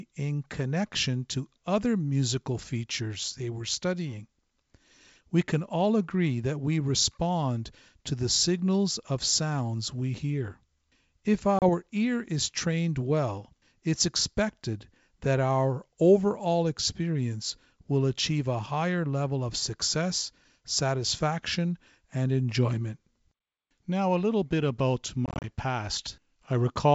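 Speech, carried over what sounds like a clean G.722 wideband link, shows packet loss on an ADPCM call. A 30 ms silent hole at 11.59 s comes just before "ear is trained well". From 25.26 to 25.50 s, just after "a little bit about", gaps totalling 120 ms are scattered, the longest 30 ms. After each hole the decoder's predictor is out of step, so the speech returns briefly distorted.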